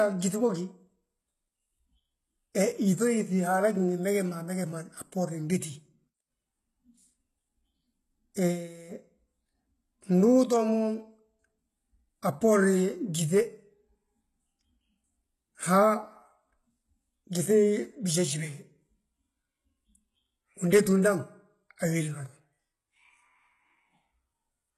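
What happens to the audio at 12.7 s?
At 12.7 s the speech is carrying the same damage as the rest of the clip, likely from HE-AAC compression at a rate near 16 kbps: the codec rebuilds the treble from copied lower bands, so sibilants turn gritty and metallic, and nothing sounds above 12.3 kHz.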